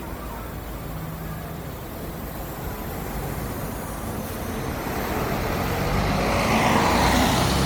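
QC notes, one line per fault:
Throughout: generation loss. The sound has a swirly, hollow smear, with spectral holes and a watery noise floor, and the attacks go soft and blurred. It's worse than a single MP3 pass would give at around 96 kbit/s. Nothing above about 19.9 kHz. The likely cause is the audio being re-encoded roughly seven times, with each pass quantising on a shifted frame grid so the damage stacks up.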